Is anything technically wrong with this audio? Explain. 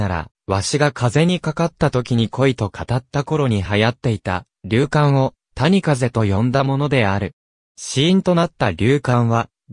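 No, nothing is technically wrong with this audio.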